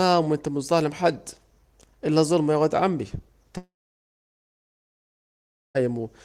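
Right after "الظلم يا واد عمي", at 3.57 s, a likely long network dropout cuts the speech until 5.81 s. A brief fading buzz gives way to 2.05 s of silence, a flat waveform and blank spectrogram, before speech resumes with that stretch lost.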